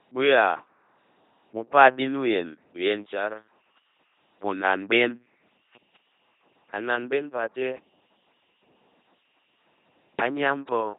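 From start to finish the speech has passed through an LPC-10 vocoder, and at 2.4 kbit/s the damage is heavy. Each moment is rebuilt from either a buzz pulse train or noise through a simple vocal tract filter, giving a mechanical, robotic voice. Nothing remains above about 3.8 kHz.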